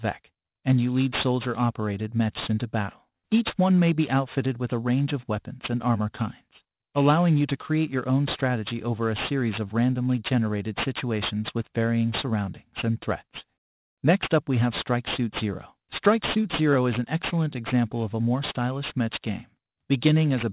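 Aliasing runs through the whole clip. The audio was evidently taken down to a much lower sample rate, which fits a move from 44.1 kHz to 8 kHz, without a proper low-pass filter first. Content that lay above 4 kHz folded back into the remaining band as unrelated, inharmonic tones, only modestly below the wanted signal. Bright, hissy sounds turn gritty and metallic. A spectrogram shows dense energy pressed right up to a hard 4 kHz ceiling, with mirrored stray components below it.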